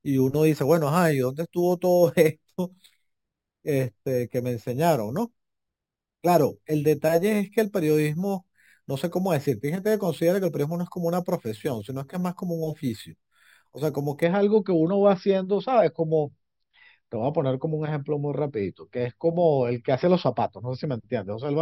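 Speech that carries imaging from sample-and-hold upsampling from 0.0 to 14.23 s. Each sample was repeated without a smoothing filter, which fits a 12 kHz to 48 kHz conversion. Mirrored copies of the speech spectrum fill 6 to 12 kHz and above, at about 22 dB below the signal, and sound like a bright metallic fizz that rises and falls with the speech.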